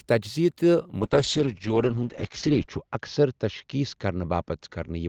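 A speech clip that goes rough and muffled from about 1.01 s to the end, a classic call bitrate drop. The encoder got squeezed from 32 kbps down to 8 kbps, staying at the bottom for 1.77 s, and the top end gets chopped from 20 kHz to 8 kHz.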